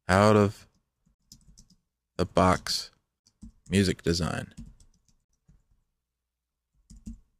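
At 1.15, 3.20 and 5.25 s, a gap between chunks leaves a 50 ms hole every 2 s. Unlike a dropout, the sound resumes where it stopped, with nothing skipped.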